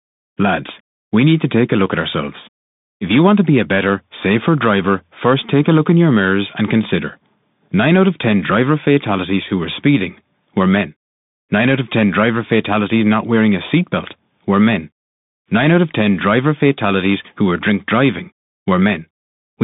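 Speech passed through a Bluetooth CVSD headset codec for its whole length, its one-bit slope coding leaving nothing above 3.8 kHz, a 150 Hz to 3.7 kHz band, plainly audible damage, scratchy s sounds and granular hiss.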